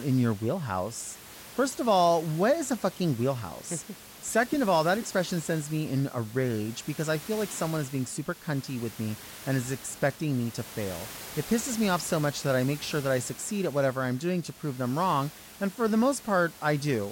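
No technical faults occur in this speech; the only other sound is room noise about 18 dB below the talker.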